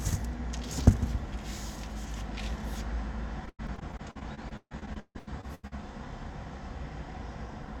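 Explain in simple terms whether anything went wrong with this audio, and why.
From 3.45 to 5.73 s there is repeated packet loss, which gives a robotic sound. Over twenty short holes open in the audio, the longest about 0.15 s. Each is patched by stretching the last sound, so 38% of that stretch is filler. It sounds choppy.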